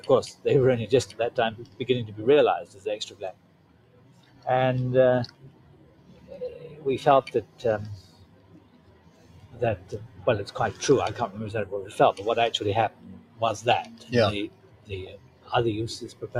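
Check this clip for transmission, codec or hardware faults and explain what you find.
One fault runs through the whole clip, with six dips where it bites hardest. There are no signs of transmission dropouts, codec damage or hardware failure.

From start to finish the level pumps and the tails thin out, swinging around 20 dB. A speech-oriented noise suppressor applied to music or sounds is treating steady material as noise.

At 1.1–1.81 s, 2.65–4.46 s, 5.31–6.78 s, 7.44–10.19 s, 12.9–15.5 s and 16.13–16.28 s, held or decaying sound sinks by about 10 dB (about 9 dB in the last). This is sound cut by the noise suppressor, with only sharp onsets surviving.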